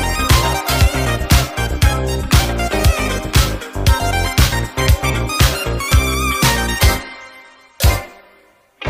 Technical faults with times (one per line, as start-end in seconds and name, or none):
none